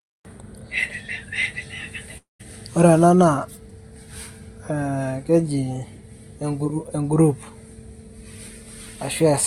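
At 2.17 s the speech breaks off: the last sound smears into a fading buzz, then silence until 2.41 s, when speech resumes with about 220 ms gone. This is likely a long network dropout. The waveform shows a decaying tail, then a flat gap; the spectrogram shows smeared, fading bands before blankness.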